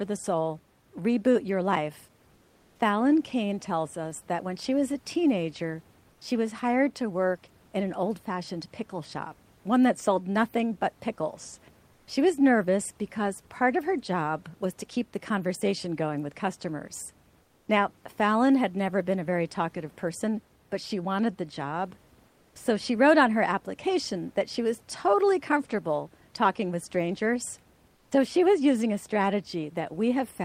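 Speech with room noise about 36 dB below it, interrupted by comfort noise in place of the background at 2.35–2.79, 6.13–6.21, 11.93–12.07, 17.43–17.67, 22.27–22.55 and 27.95–28.11 s: flat, featureless hiss about 2–4 dB quieter, and about 13 dB quieter at 27.95 s, likely from Opus discontinuous transmission. At 28.06 s the onset is clipped by the voice detector: about 50 ms of the sound's start is missing, likely never sent, so it begins abruptly out of the synthetic noise.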